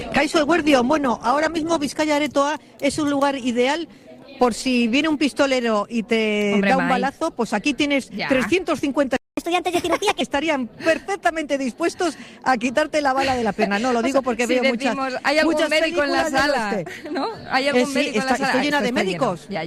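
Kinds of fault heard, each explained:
Adaptive stream starting at a low bitrate: For the first 2 seconds the sound is dull and smeared, with nothing above 12.3 kHz and heavier codec artefacts. At 2.0 s the top end and clarity return abruptly, with no break. The player opened on a thin, cheap version of the stream so it could start quickly, then switched up once it had gauged the connection. The jump in quality fits a move from roughly 16 to 64 kbit/s.
Playback stall: At 9.16 s the sound cuts out mid-flow and stays silent for about 209 ms, resuming at 9.37 s. The likely cause is that the player ran short of buffered data, or its playback thread was held up, so nothing reached the output until the supply recovered and it could carry on.
Catch-up at higher speed: From 9.37 s to 10.21 s, straight after the dropout, everything runs 1.25 times fast and sits roughly four semitones high, then snaps back to normal speed and pitch. 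Having fallen behind during the silence, the player resampled its backlog to push it out quicker. That closes the timing gap, but speed and pitch rise together because nothing separates them.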